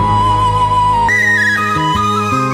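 From 1.09 s to the end, a wrong sample rate kicks in: audio recorded at 24 kHz plays at 48 kHz, so it runs twice as fast and a full octave high.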